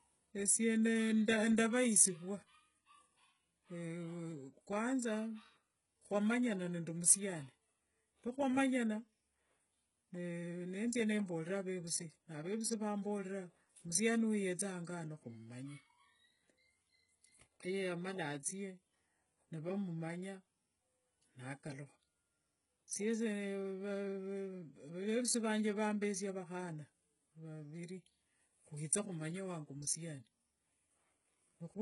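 Throughout the speech there is heavy codec damage, likely HE-AAC compression near 12 kbps. Nothing remains above 11.1 kHz, and treble copied from lower bands makes s sounds gritty and metallic.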